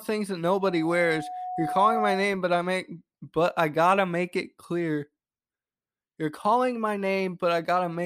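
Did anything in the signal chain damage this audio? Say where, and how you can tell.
Yes. Loudspeaker feedback squeal in the analogue acoustic path, 0.48 to 2.36 s: a 731 Hz tone builds over about a second and a half to roughly speech level, as loop gain exceeds unity.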